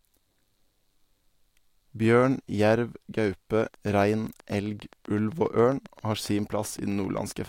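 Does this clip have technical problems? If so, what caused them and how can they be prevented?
Yes. From 3.60 to 7.46 s a regular train of clicks, about 7.5 per second and roughly 30 in all, ticks over the speech at about signal level, likely interference or a faulty connection or power supply injecting pulses. Spectrograms show evenly spaced thin vertical broadband lines; waveforms show matching sharp spikes. Shielding cables, moving away from noisy equipment and using a stable interface prevent this.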